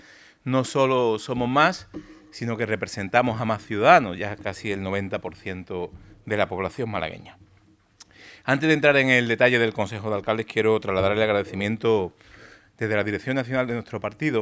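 Nothing in the audio stood out as a technical problem on listening.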